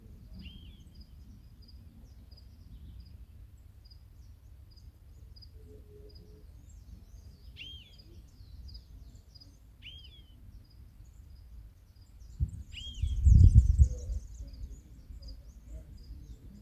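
No technical faults can be heard anywhere in the audio.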